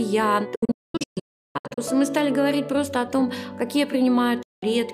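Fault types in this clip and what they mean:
Digital broadcast dropout: the receiver stopped getting decodable frames, either because the signal dropped out or because frames failed their checksum, and it muted until valid data returned. The sound fades out within about 8 ms into a cluster of silent holes between 0.55 and 1.78 s, totalling 960 ms of lost audio with the longest gap 352 ms, and then into a single 192 ms gap from 4.42 to 4.63 s. Nothing sent during those gaps comes back.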